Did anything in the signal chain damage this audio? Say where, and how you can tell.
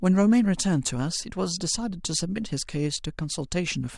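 No, nothing audible in this speech points to damage at any stage of the signal chain.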